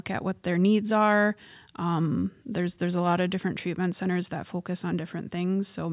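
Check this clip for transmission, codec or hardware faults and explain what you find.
No transmission, codec or hardware faults.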